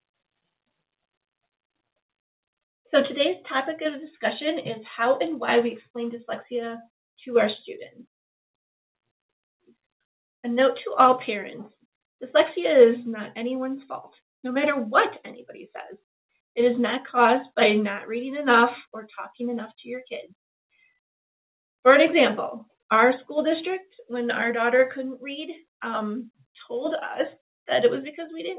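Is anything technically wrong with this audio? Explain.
No, nothing is technically wrong; the audio has passed through a call path whose band stops at 4 kHz, which fits a narrowband telephone codec such as G.711 mu-law, and that limit is normal for such a link.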